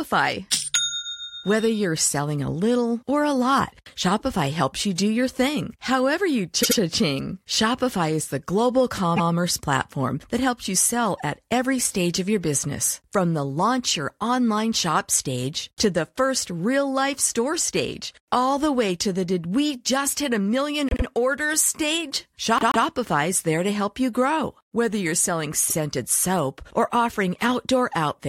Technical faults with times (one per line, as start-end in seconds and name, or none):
6.62-6.78 repeated frames
9.16-9.31 repeated frames
20.89-21.04 repeated frames
22.58-22.85 repeated frames